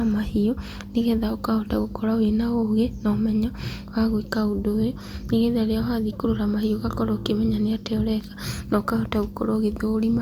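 No technical faults can be heard anywhere in this speech recording.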